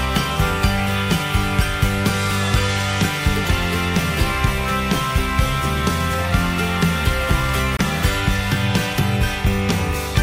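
At 7.77 to 7.79 s the sound cuts to 23 ms of silence and then resumes, likely a Bluetooth stall.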